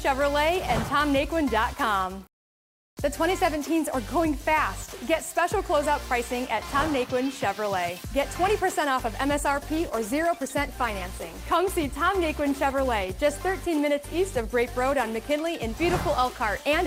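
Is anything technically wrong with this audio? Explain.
Yes. From 9.05 to 16.39 s a call bitrate drop makes the audio coarse and dull, which fits the encoder falling from about 128 kbps to about 21 kbps, bottoming out for 2.5 s. Unlike packet loss, the audio stays continuous with no gaps.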